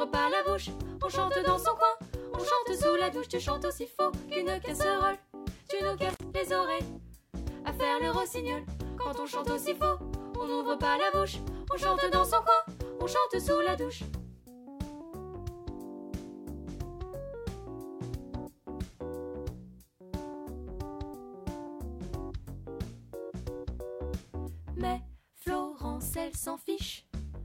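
A loose plug or cable briefly lost its connection between 6.10 and 6.23 s, an intermittent contact fault. Within that span the signal path was actually broken for about 57 ms, so the sound drops out abruptly rather than fading. The make-and-break at each edge, as the contacts scrape apart and meet again, adds a short crackle before and after the gap, and during the open moment a faint hiss remains where the audio should be.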